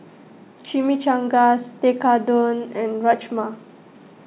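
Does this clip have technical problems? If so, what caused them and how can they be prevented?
No, no technical faults are audible anywhere in this speech recording, so there is no cause to trace and nothing to prevent.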